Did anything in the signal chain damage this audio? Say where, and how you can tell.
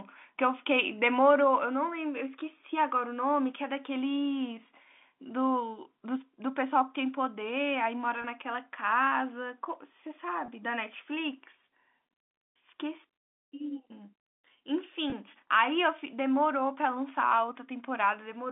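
Yes, at the network stage: packet loss with pitch repetition at 8.22–8.24 s, 10.46–10.48 s and 15.10–15.12 s. Each gap is about 20 ms, consistent with a single lost packet, bridged by repeating the last pitch period. That makes a brief buzzy hold rather than the silent hole or click of a plain dropout.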